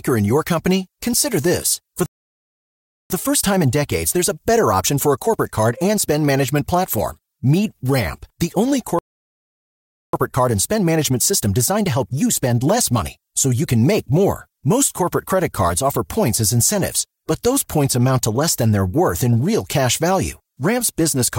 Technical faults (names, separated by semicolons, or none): playback stall; time-compressed catch-up